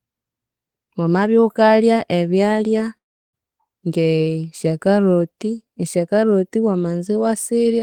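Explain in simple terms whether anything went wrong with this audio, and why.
Around 2.97 to 3.35 seconds, the speech most likely suffered a long network dropout: for a moment, roughly a third of a second of audio never reached the listener's end. The receiver tried to cover the gap by stretching out the last bit of sound, which turns into a fading buzz and then near silence. Speech resumes after "wamabya wukalya ebyalya" with "ng'esya caroti esya caroti", but the missing piece is simply gone.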